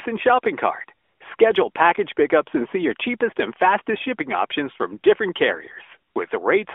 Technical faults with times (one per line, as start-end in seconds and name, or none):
1.04-1.38 AMR comfort noise
6.12-6.16 AMR comfort noise